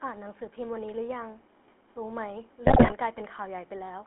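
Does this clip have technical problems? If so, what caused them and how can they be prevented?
Yes. Throughout the clip the speech carries the gravelly, buzzy roughness of the GSM full-rate codec. It rebuilds the voice from a vocal-tract filter driven by a sparse, regularly spaced pulse excitation, which fits a 13 kbps full-rate stream. The damage is plainly audible. On a spectrogram, energy sits in a band from about 250 Hz to 3.5 kHz with nothing above, and the harmonics look smeared and grainy rather than clean. Prevent this by carrying the call over a wideband or modern codec such as AMR-WB or EVS instead of the legacy full-rate coder.

From 2.66 to 2.93 s, GSM bit errors break the voice into squawks, pops and gargling. Corrupted bits on a weak radio link reached the decoder and scrambled its filter, pitch and gain parameters, so each damaged 20 ms frame came out with a warped spectrum or a sudden level jump. 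The pattern points to over a dozen frames hit and a bit error rate of roughly 6 percent. On the waveform this stretch shows abrupt amplitude spikes and ragged frame-sized blocks. On a spectrogram it shows broadband smears and formants jumping between frames. Prevent this with a stronger signal, better channel coding, and bad-frame detection that mutes or conceals corrupted frames instead of decoding them.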